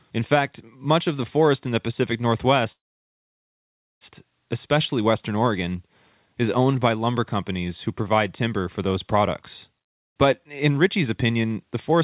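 Speech carried over a narrowband call path, with nothing above 4 kHz, which fits 64 kbps G.711 mu-law coding. From 2.72 to 4.04 s there is a call audio freeze. The sound stops and holds for about 1.29 s, nearly all of it silent (about 1.24 s), then resumes exactly where it left off. Nothing is lost, but the playout now runs about 1.29 s later. The likely cause is packets stalled in transit that drained the jitter buffer, with the receiver filling the wait until they arrived. From 10.47 to 12.01 s a jitter buffer speed-up follows. Playback runs at about 107% speed with unchanged pitch, so the speech sounds hurried. This happens because the receiver trims short pitch-period slices, about a tenth of a second in total, to shrink the buffer back toward its target.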